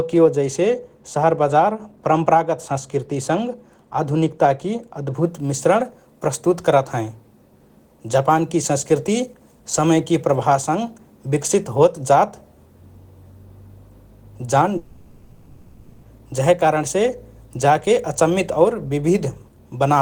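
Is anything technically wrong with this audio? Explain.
Yes, two faults can be heard in this speech clip.

From 0.0 to 5.25 s, de-emphasis has been applied wrongly. A treble cut meant to undo pre-emphasis has hit audio that had no such boost, or has been applied twice, so the high end is about 8 dB down at 10 kHz relative to 1 kHz. The speech sounds dull and muffled, with softened sibilants. On a spectrogram, energy above a few kHz is visibly dimmer in this stretch, rolling off smoothly rather than at a sharp edge, and it brightens once the section ends.

From 14.77 to 16.20 s there is a gap in the speech, most likely a long network dropout in which a run of audio never reached the receiver. The player fills the whole 1.26 s by extending the last sound as a buzzy, hissy tone that fades, with no true silence. The speech then resumes at "जहे कारणसे जाके अचम्मित", with the lost portion gone. 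A spectrogram shows smeared, repetitive texture in place of speech structure, and the waveform shows a decaying envelope before the speech returns.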